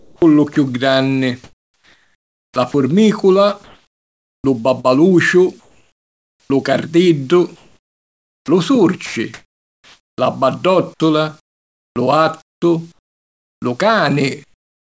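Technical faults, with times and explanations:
0.00–2.74 s, 3.64–6.50 s, 7.56–10.18 s and 10.98–13.62 s, sound chopped by the voice detector: quiet syllables and word edges give way to flat hiss, about 1.4 s, 1.78 s, 1.86 s and 1.46 s in each stretch. The cause is likely a sender's voice detector toggling transmission, with comfort noise filling the gaps. On a spectrogram, speech energy stops abruptly into smooth, textureless noise bands capped near 8 kHz.
14.44–14.90 s, comfort noise in place of the background: the real room sound is replaced by a steady, featureless hiss, roughly 15 dB quieter and sitting about 47 dB below the loudest speech. This is likely discontinuous transmission, with the receiver synthesising noise during the pause. The waveform shows a sudden drop to an even, low envelope.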